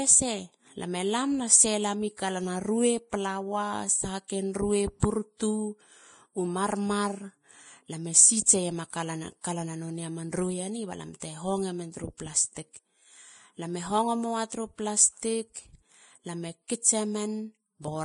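A speech recording carries heavy lossy-codec damage from start to finish, most likely Vorbis compression at a low setting; the degree of degradation fits a bitrate of roughly 28 kbps. Everything above 10.6 kHz is gone, and the remaining treble is quantised so coarsely that fine detail turns into hiss-like grain, roughening sustained tones and smearing attacks. On a spectrogram this appears as a flat ceiling at 10.6 kHz with mottled, patchy energy just beneath it.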